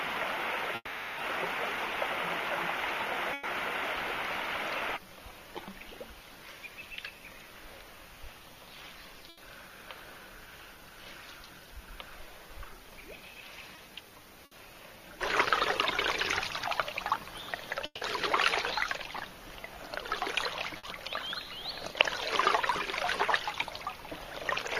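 From 0.75 to 1.19 s the sound stretches into a fading buzz or hiss for roughly 0.4 s before a brief silence, likely a long network dropout, and that chunk never returns. At 3.33 to 3.45 s and 9.29 to 9.39 s there's a burst of packet loss, with about 100 ms and 80 ms covered by a held, dying tail. Around 13.75 to 13.79 s a short concealed packet loss leaves a quick smear. Another burst follows at 14.45 to 14.53 s. From 17.85 to 18.03 s a second likely dropout fades out with a touch of silence. The last burst hits at 20.77 to 20.85 s.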